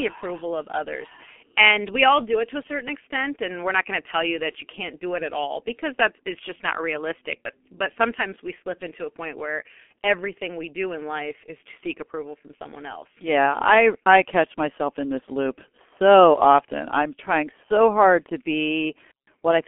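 From start to finish the speech carries heavy G.723.1 codec damage. Its sound points to a low-rate internet-telephony coder, about 6.3 kbit/s, working in 30 ms frames. Nothing survives above 3.5 kHz, and the low end falls away below 250 Hz. The vocal model updates slowly, so rapid changes smear across frames. The result is muffled and hoarse. Consonants blur, and sibilants lose their edge.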